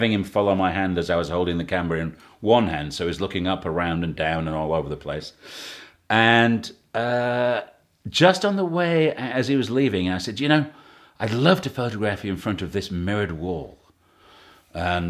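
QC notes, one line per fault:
No faults heard in this speech.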